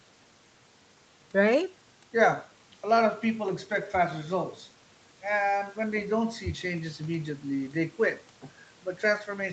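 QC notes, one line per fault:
Nothing to log in these QC notes: the speech has no fault.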